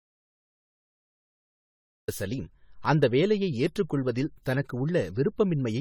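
From the very start until 2.08 s there is an audio dropout to silence. The clip opens in silence with no room tone, which sets it apart from a noise gate's quiet, and speech arrives abruptly with "சலீம் அந்த வேலையை ஏற்றுக்கொள்வதில்", likely because the input was lost while the recorder kept writing silence.

Throughout, the speech carries generation loss. It has a swirly, hollow, smeared texture with blurred consonant onsets and no content above 19 kHz. That is worse than a single AAC-LC encode at about 64 kbit/s would give, and likely comes from around ten successive re-encodes piling up artefacts.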